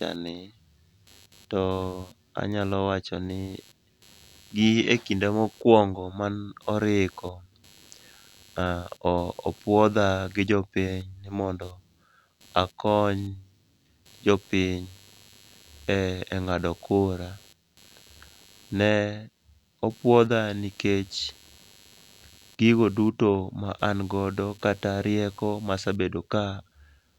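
Speech, with computer activity noise running under it from start to finish. A buzzing, chirping texture pulses at around 100 Hz, sitting roughly 30 dB below the speech, and its intensity shifts with what the host machine is doing rather than with the talker. Processor, graphics or mouse load changes the current drawn through the computer's ground, and the audio circuit shares that ground, so the digital activity leaks into the recording path as this audible interference.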